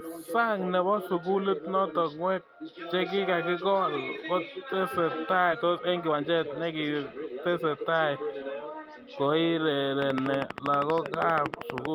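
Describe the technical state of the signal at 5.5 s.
A skip ahead at 5.51–5.53 s drops about 0.7 s of speech, so playback leaps forward and joins both sides almost seamlessly with no gap. A jitter buffer speed-up follows from 5.55 to 7.85 s, where repeated removal of short pieces of one or a few pitch periods trims about 0.4 s, making the speech run 115% fast and hurried at unchanged pitch.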